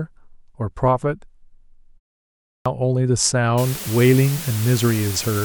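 At 2.50 s, after a pause of about 0.59 s, the speech resumes with a clipped start after a pause: roughly 156 ms of its opening is missing, so it bursts out of silence with its first sounds gone. The output device likely dozed and was slow to wake.

From 3.58 s to the end, low bit depth with dither lays a constant, even hiss over the speech, about 10 dB below it, which fits a word length of around 5 bits. Dither turns the rounding error into steady white noise. Without it, the same coarse rounding would give a gritty distortion that follows the level of the speech.

At 3.87 s, compressed frames skipped make the audio jump ahead by about 150 ms, which points to roughly five dropped codec frames of about 26.1 ms each.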